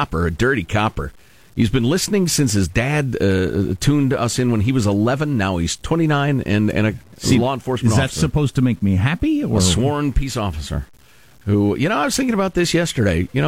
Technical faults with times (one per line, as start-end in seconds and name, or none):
0.00-13.48 low bit depth without dither